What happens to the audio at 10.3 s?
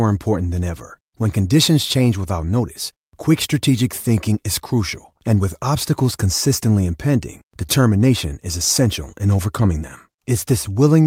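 At 10.3 s the audio is inside a stretch of repeated timing corrections running from 0.50 s to 10.90 s, near the end of that run. The receiver keeps inserting short repeated pieces to stay in step, all in the same stretching direction, so the sound plays at about 98% speed and gains roughly a fifth of a second over the stretch. If heard at all around 10.3 s, this comes across as a slight hiccup or an unsteady tempo rather than a clear break.

The cause is clock drift between sender and receiver, present throughout the clip. The sender's audio clock runs about 1.5% slower than the receiver's, so the jitter buffer keeps draining a little faster than it refills. To avoid running empty, the receiver pads the stream with repeated fragments at uneven intervals. That repeated padding is what slightly stretches the timing at this moment and spaces the edits irregularly.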